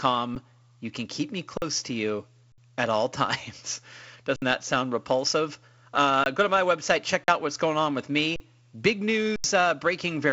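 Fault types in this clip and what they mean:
Underrun with held sample: at 0.35, 1.57, 2.52, 4.36, 6.24, 7.24, 8.36 and 9.36 s the output buffer runs empty and the converter holds its last value, so the speech stops on a flat level for 10 to 80 ms.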